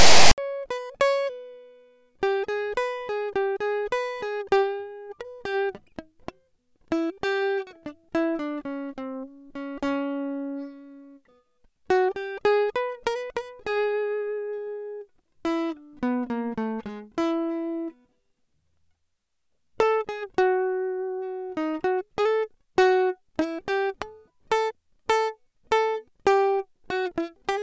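Text tags with zero padding, read as sample data rather than skipped as metadata, produce a file tags played as audio fault from 0.00 to 0.38 s. It sounds as a loud, hard-edged rasp pushed to one side, then a stretch of silence from the padding, before the music begins.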